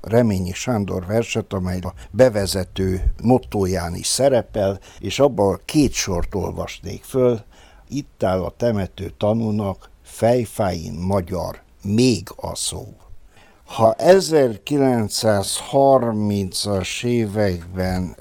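At 12.81 s the pace suddenly drops to 0.64 times normal speed and stays there until the end at 18.20 s, yet the pitch doesn't budge. That's a time-stretched section, likely software lengthening the audio by repeating short slices, which makes it drag.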